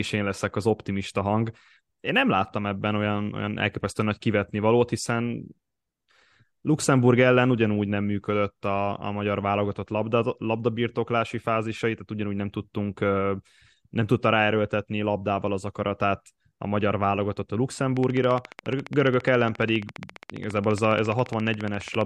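From 17.97 to 22.02 s there's a train of clicks: regular ticking, 14.6 per second, peaking about 5 dB over the speech, likely nearby-equipment interference.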